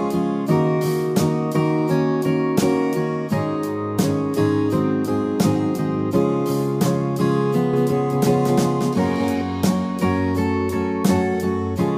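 From 7.74 s to 9.42 s, a doubled audio track appears. A second full-band copy of the sound trails the original by about a fifth of a second. It sits roughly 5 dB below the original. The copy has no decay and no room colour. It cuts in and out abruptly at both edges. The likely cause is the same signal being captured again through a slower path and mixed back in.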